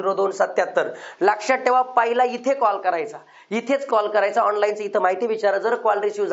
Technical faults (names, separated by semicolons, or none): none